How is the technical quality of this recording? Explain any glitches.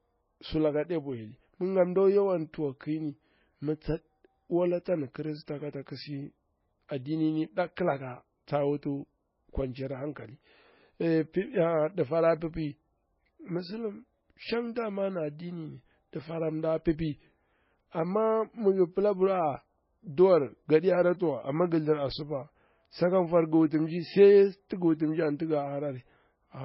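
Quality is poor throughout the speech, with heavy codec damage from start to finish. The likely cause is MP3 compression at a very low bitrate, around 17 kbps. Short of bits, the encoder removed everything above 5.5 kHz and dropped weak frequency lines frame by frame, leaving dull, watery, swirling speech with chirpy s sounds and smeared consonant onsets.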